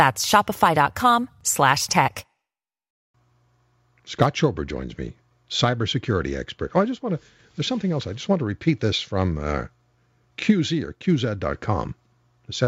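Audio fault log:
No technical faults can be heard anywhere in the speech, and the signal stays steady and undisturbed throughout.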